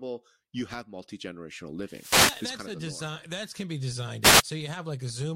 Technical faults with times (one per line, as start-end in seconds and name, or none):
1.84-2.56 wireless microphone noise hit
4.21-4.43 wireless microphone noise hit